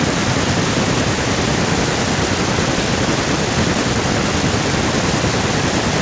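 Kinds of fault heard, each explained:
Echo with no canceller: the far end's loudspeaker feeds its microphone and nothing subtracts it, so every phrase returns about a third of a second later, about 14 dB down and thinner. On a spectrogram each syllable has a fainter, smeared twin trailing it in time.
Jitter buffer speed-up: between 3.36 and 4.34 s the receiver drains a backlog by cutting pitch-period-sized pieces, about 40 ms in all, so the speech runs at 104% speed without changing pitch. The waveform shows whole cycles dropped out and small seams, but no gaps.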